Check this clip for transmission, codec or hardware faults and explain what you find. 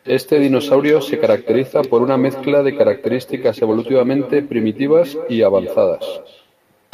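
There is one fault, an echo with no canceller, present from start to finish of the speech. At the far end the call is being played through a loudspeaker, the microphone there picks it back up, and no echo cancellation strips it out, so the signal returns across the network. Each phrase is trailed roughly a fifth of a second later by a copy about 13 dB quieter, sounding thinner than the original.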